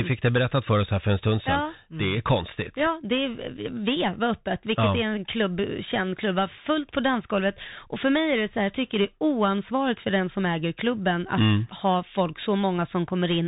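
From start to finish the speech passes through a Bluetooth CVSD headset codec. Nothing above 3.8 kHz survives, so the sound is narrow and dull. One bit per sample tracks the waveform, which fits a 64 kbps link. Sharp sounds overrun the step size, s sounds turn scratchy, and granular hiss sits underneath.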